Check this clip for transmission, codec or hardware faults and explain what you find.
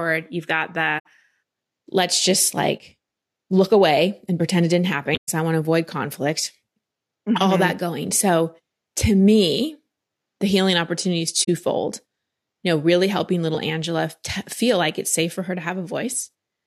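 The speech carries three short dropouts from corrupt frames that were concealed.

Corrupt frame concealed, at 0.99 to 1.06 s, 5.14 to 5.29 s and 11.43 to 11.49 s. Damaged bits in the compressed AAC stream were caught by the decoder, which replaced the bad frames with a muted or scrambled stand-in rather than playing garbage. The spots span about 80 ms, 150 ms and 60 ms. The longest, near 5.1 s, points to a run of several consecutive damaged frames.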